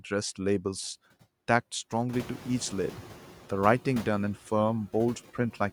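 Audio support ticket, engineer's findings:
Noise suppressor artifacts throughout. Background sinks between phrases and swells under speech. Suppressor cuts about 9 dB of steady noise, frame by frame. Band gains pump with speech energy.

Noise suppressor catching up, 2.13 to 3.26 s. Room noise jumps about 15 dB around 2 s. Suppressor's noise estimate lags, cutting only about 4 dB at first. Noise fades back down as the estimate adapts over 1.13 s.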